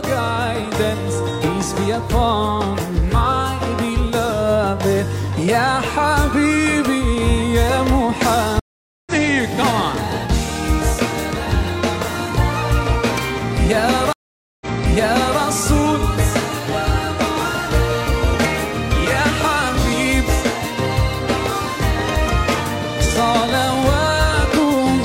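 At 8.60 s the sound cuts to silence for 470 ms, and when it returns at 9.12 s it has skipped ahead by roughly 0.4 s. At 14.13 s a second silence of 481 ms follows, but this time playback resumes 789 ms earlier, replaying a stretch already heard, and runs on to 15.40 s. Both are stream reconnects: the connection dropped, the player restarted its decoder mid-stream, and the restart landed at a different point in the stream. Unlike a simple dropout, where the gap is filled and the material then continues where it left off, the audio here does not line up across either break.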